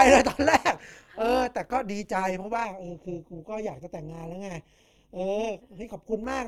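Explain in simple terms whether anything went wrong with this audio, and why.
Overlap-add ripple runs through the whole clip, from start to finish. The speech was chopped into short overlapping slices and stitched back together unevenly, so the loudness pulses about two hundred times a second, giving a fast, metallic, robotic buzz over every sound.

Channel delay (comb filtering) starts at 2.65 s and lasts until 6.24 s. One channel arrives a fraction of a millisecond late and is mixed with the other, so some frequencies cancel, starting around 1.5 kHz. The speech sounds hollow and phasey there.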